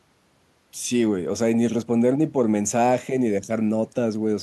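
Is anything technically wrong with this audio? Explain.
No, nothing technically wrong is audible in this speech recording.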